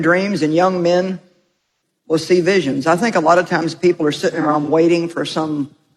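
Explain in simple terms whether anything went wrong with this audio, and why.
Something did go wrong, twice. The fault is AAC frame loss with concealment. Small chunks of the compressed audio never arrived. The player guessed at the missing parts by reusing the last good sound. From 1.35 to 1.61 s the sound fades to a very faint noise and back in, which fits a long run of lost chunks. From 4.31 to 4.68 s there are several brief patches instead. The longest lasts only about 40 ms, so they pass as quick roughness.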